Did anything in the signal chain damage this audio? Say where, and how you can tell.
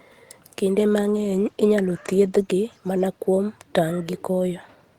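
Yes, at the codec stage during the call. From 0.78 s to 2.51 s, just before "mana kuom", the speech turns rough and watery, worst for about 1.7 s, which fits a call bitrate drop from roughly 32 kbps to 14 kbps. The falling bandwidth estimate made the encoder spend far fewer bits, so it coded more coarsely. On a spectrogram, harmonics in that stretch look smeared and blocky.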